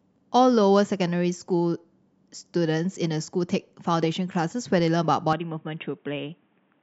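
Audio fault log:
5.33 s to end: input switched to a poorer device. With no gap, the sound turns dull with nothing above 3.8 kHz, about 5 dB quieter, and faint new noise, likely from a narrower-band microphone.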